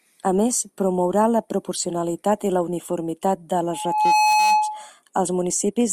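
Right after "i la uniformitat de", at 3.70 s, a loudspeaker feedback squeal kicks in: the mic is hearing its own speaker, and around 852 Hz the loop gain tops one. The tone swells over about half a second, ends up a bit louder than the speech, and hangs on until 4.90 s.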